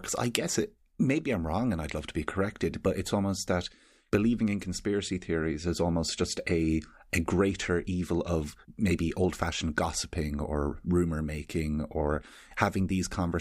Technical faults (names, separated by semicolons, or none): none